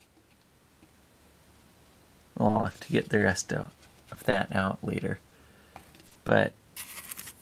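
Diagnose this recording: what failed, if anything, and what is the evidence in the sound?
The network failed, with repeated packet loss giving a robotic sound from 2.47 to 4.63 s. Ten gaps fall in that stretch, none longer than 30 ms. The receiver patched each by extending the last sound, so about 140 ms is missing. The result is choppy, with pieces missing.

Short concealed packet loss follows at 5.29 to 5.33 s and again at 6.13 to 6.17 s. Each time, about 20 ms of audio never arrived. The decoder filled it by continuing the preceding sound, then blended back. This gives a brief smear or wobble.

A short stall from a late packet occurs at 6.07 to 6.13 s. Delay jumped by 40 ms and the jitter buffer ran dry. The receiver stretched the last sound until the packet came. Nothing is lost, but the sound holds too long, with a faint buzz or dip.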